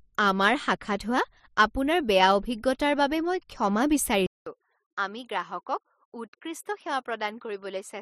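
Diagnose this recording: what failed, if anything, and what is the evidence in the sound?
At 4.26 s, a 200 ms gap. Afterwards nothing passes above 12.5 kHz and level drops about 5 dB. Driver stage: input likely switched to a poorer device.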